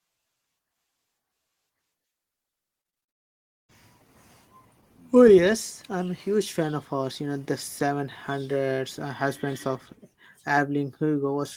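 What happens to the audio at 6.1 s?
Nothing goes wrong at 6.1 s: the speech carries on intact through that moment, with no dropout, click or distortion to be heard.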